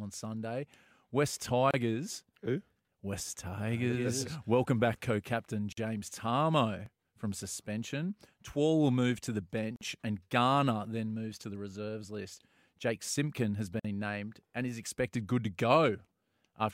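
A speech recording with two recurring join faults, both on a 4 s cycle. Gaps at a join of encoded pieces occur at 1.71–1.74 s (29 ms), 5.72–5.77 s after "back co captain", 9.76–9.81 s, and 13.80–13.85 s before "named and is" (each 49 ms). Separately encoded segments were joined with their start-up delay and end padding left in, so the waveform drops to a flat line and the spectrogram shows a thin blank vertical stripe across all frequencies before the sound resumes where it left off. Audio missing between chunks shows up at 6.86 s, 10.85 s just before "then moves to the", and 14.84 s as brief skips of around 15 ms with no silence inserted. The likely cause is a chunked recorder dropping samples while switching 4 s buffers, so the waveform jumps abruptly and the spectrogram shows a sudden discontinuity rather than a gap.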